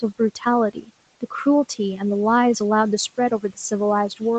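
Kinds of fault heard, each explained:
Speech cut by the noise suppressor: near 0.73 and 3.4 s, speech is pulled down about 17 dB with the background, fading out, unlike an abrupt dropout.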